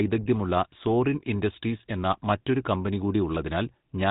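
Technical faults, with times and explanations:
Throughout: GSM full-rate codec. The sound has a buzzy, gravelly roughness and nothing above 4 kHz, as the vocal-tract model is driven by a sparse, regularly spaced pulse excitation. The plainly audible coarseness fits a low-rate coder of about 13 kbps.
2.12–2.16 s: GSM bit errors. A brief squawk and gargle breaks through, which fits two corrupted 20 ms frames. Flipped bits in the filter, pitch or gain parameters reach the decoder, bending the spectrum and jolting the level for that moment.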